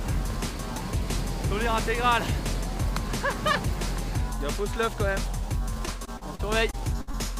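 Repeated packet loss (robotic sound) runs from 5.85 to 7.15 s. Packets keep going missing or arriving late, and each hole is patched by extending the preceding sound, the longest about 61 ms. Roughly a sixth of the stretch is filled this way, giving the audio a choppy, robotic quality.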